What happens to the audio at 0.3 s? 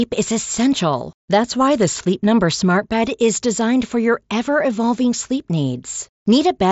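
At 0.3 s the audio is intact, with nothing going wrong at that moment beyond the band limit of the mSBC Bluetooth headset link it passes through, which leaves nothing above about 7.7 kHz.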